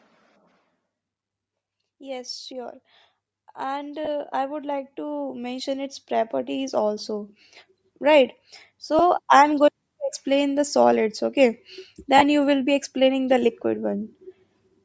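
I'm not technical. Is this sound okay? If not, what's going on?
No. The whole recording has a plainly breathy, grainy edge. That is likely Bluetooth LC3 compression, the squeezing Bluetooth wireless audio does to send speech. It throws away fine high detail and fills the gap with soft hiss.

From 3.55 to 7.39 s, the volume climbs slowly. This is automatic gain rising. The automatic gain control decided the sound was too quiet and turned the level up, so the voice and the background noise swell together.

There are also three tiny hiccups from lost LE Audio frames. Small chunks of audio never arrived, and the decoder patched them with a brief noisy smear. They happen at 4.05 to 4.08 s, at 8.99 s just before "I'm going to explain", and at 12.18 to 12.22 s between "explain the solids okay" and "you will be explaining".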